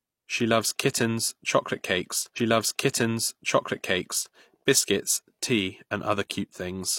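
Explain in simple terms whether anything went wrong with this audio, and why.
Something did go wrong. This is a stream segment repeated fault. Just after "loves kittens chocolate cakes", at about 2.33 seconds, the audio jumps back and plays a stretch of speech again. The repeat runs until about 4.32 seconds, then carries on with "biscuits tea". That adds about two seconds. The player fetched or queued the same chunk of the stream twice, so that piece plays a second time, with a small blip where it jumps back.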